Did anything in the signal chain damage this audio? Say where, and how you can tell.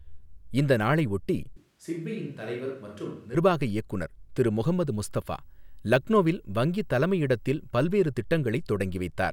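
Yes. At the capture stage there is a switch to a distant microphone from 1.57 to 3.34 s, starting right after "இந்த நாளை ஒட்டி" and ending just before "இயக்குநர் திரு". The speech abruptly turns roomy and hollow, loses bass and drops by about 10 dB, while room noise rises to roughly 35 dB below the speech. The likely cause is that the close microphone's feed dropped out, leaving only a far pickup.

The analogue wiring picks up video or display buzz from 4.66 to 7.87 s, beginning after "இயக்குநர் திரு". A screen or video cable is coupling its scan signals into the audio line. The field rate shows up as a buzz at 59.94 Hz with hash above it, and the line rate adds a thin, very high whine at 15.7 kHz. The interference sits at about 45 dB below the signal.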